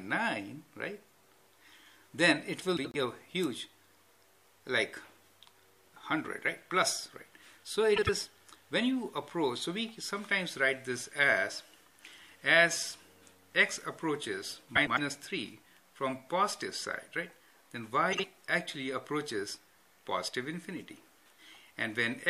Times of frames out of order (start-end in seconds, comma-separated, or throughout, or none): 2.77-2.96, 7.96-8.09, 14.75-14.99, 18.12-18.25